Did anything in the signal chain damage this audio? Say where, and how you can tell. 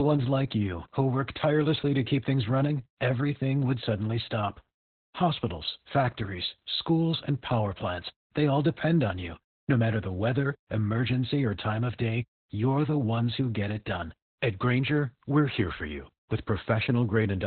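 Yes, and it's the codec stage: this is Opus voice compression running hard. Across the whole clip the speech stops dead around 4.2 kHz, so it has that narrowband telephone muffle, plus a hoarse, slightly robotic grain. That points to SILK alone squeezed down to roughly 8 kbps. At that rate the encoder drops everything above 4 kHz and codes the excitation coarsely.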